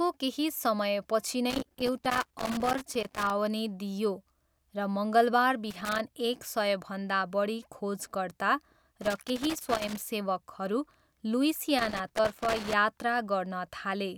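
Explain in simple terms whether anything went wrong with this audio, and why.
Something did go wrong: the speech is broken up four times by loose connector crackle, from 1.50 to 3.30 s just after "केही समयपछि", 5.71 to 5.99 s just before "एक सयभन्दा बढी खोजकर्ता", 9.02 to 10.03 s right after that same phrase, and 11.79 to 12.73 s. A worn or dirty plug contact was flickering on and off as it moved, chopping the signal into rough, irregular bursts of scratchy crackle.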